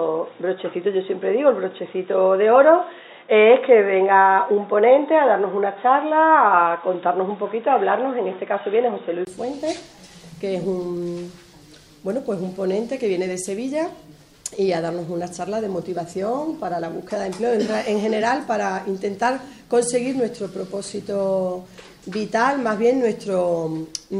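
From the start to 9.27 s the sound is confined below 3.8 kHz, giving a dull, boxy character, with its own background noise sitting roughly 50 dB under the signal. At 9.27 s there is a 20 ms silence, after which the full band returns and the level shifts by around 5 dB. This points to an input switched to a poorer device, likely another microphone or a headset's call profile, before the original input resumed.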